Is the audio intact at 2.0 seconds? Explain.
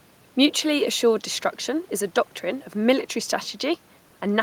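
Yes, the speech at 2.0 seconds is intact, with no fault audible at that moment.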